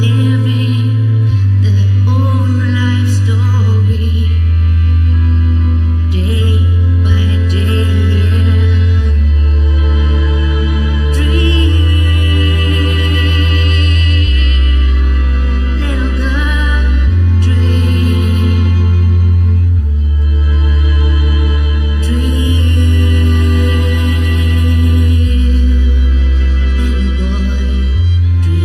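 From start to finish the audio carries channel delay (comb filtering): one channel lags the other by a little under a millisecond, and when the two are summed, content common to both cancels at evenly spaced frequencies. The first notch sits around 700 Hz, with further notches repeating upward at regular intervals, giving a hollow, phasey tone. A spectrogram shows fixed dark horizontal stripes that never move, while the waveform itself looks unremarkable.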